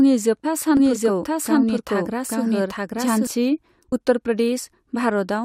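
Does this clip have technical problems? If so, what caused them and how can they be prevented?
Yes. Damaged data in a compressed stream causes a brief glitch at 0.44 s and again from 3.91 to 3.93 s. The decoder misreads corrupted frames and loses sync before finding the next header. Checksummed transport and error-resilient containers would prevent it.

A doubled audio track runs from 0.77 to 3.27 s. A second, equally loud, full-band copy trails roughly 0.7 s behind, likely from a second capture path or a misaligned edit. Unlike a room echo, it has no decay or tonal colouring and starts and stops abruptly. Routing each source through only one path would avoid it.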